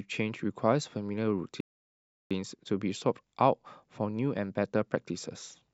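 At 1.60 s the speech halts in a rebuffering stall: the player exhausted its downloaded audio and waited for more, leaving silence until 2.31 s, about 0.70 s of added time. Playback then picks up at exactly the point it left off, so nothing is skipped. On a waveform this shows as a flat gap splicing two continuous halves; a spectrogram shows a blank vertical band with harmonics resuming unchanged.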